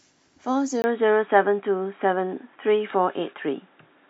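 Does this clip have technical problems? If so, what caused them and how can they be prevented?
Yes. At 0.82 s, after a 20 ms gap, the speech turns dull and boxy, cut off above 3.8 kHz; likely an input switched to a poorer device. Fixing the recording to one microphone and disabling automatic device or headset-profile switching prevents it.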